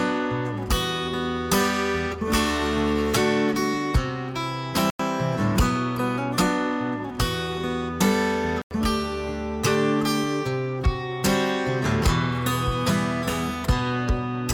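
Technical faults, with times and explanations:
4.89–5.04 s and 8.62–8.72 s, corrupt frame muted: the sound cuts to dead silence without any fade, for about 0.16 s and then 0.11 s, and resumes on schedule. Bit errors damaged compressed frames, the decoder rejected them, and the player inserted silence in their place. Each gap spans whole frames, which fits a run of a few rejected frames per event. Timing is preserved, so nothing afterwards shifts.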